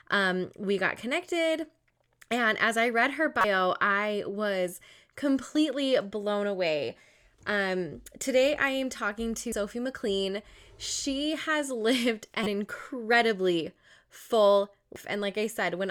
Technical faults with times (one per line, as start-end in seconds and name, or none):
3.41-3.44 damaged data in a compressed stream
5.55 damaged data in a compressed stream
9.52 damaged data in a compressed stream
12.43-12.47 damaged data in a compressed stream
14.96 damaged data in a compressed stream